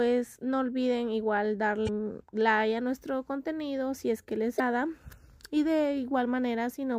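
At 1.84 s the sound breaks up for about 44 ms, until 1.89 s. This is damaged data in a compressed stream. Part of the encoded data there is corrupt, so the decoder misreads the affected frames. It loses sync and hunts for the next valid frame header. The result is a brief chirp, squawk, click or gap. The same fault returns from 4.56 s to 4.61 s, again lasting about 44 ms.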